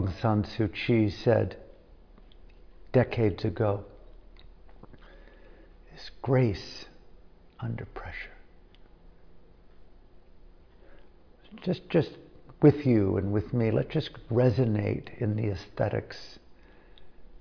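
Nothing stood out on listening to the clip.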